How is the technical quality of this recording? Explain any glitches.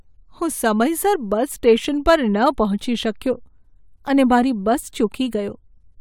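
The recording's signal holds together without any technical faults to explain.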